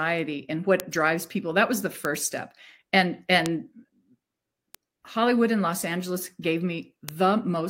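Bit error spikes tick at 0.8, 2.05, 3.46, 4.75 and 7.09 s. Each is a flipped bit jumping one or a few samples, heard as a sharp broadband click.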